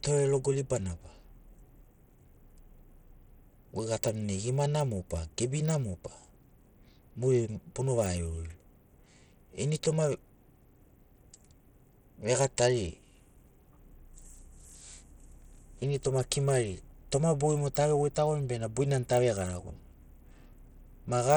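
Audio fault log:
Throughout, Bluetooth SBC compression (likely cause): plainly audible gritty, flickering treble on the speech, as a starved bit pool, which fits roughly 80 kbps, leaves the upper sub-bands nearly bitless.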